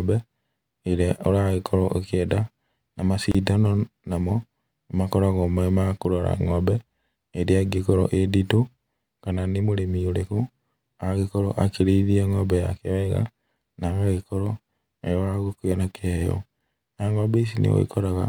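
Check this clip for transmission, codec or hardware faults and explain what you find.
One codec fault is present: a gap at a join of encoded pieces, running from 3.32 to 3.35 s in the speech. The audio appears to have been encoded as separate segments and butted together untrimmed, so the encoder's start-up delay and the padding on the preceding segment's final frame both remain. The result is a gap of about 30 ms cutting into continuous sound, with its edges smeared by the codec so the silent part is shorter, after which the audio resumes where it stopped.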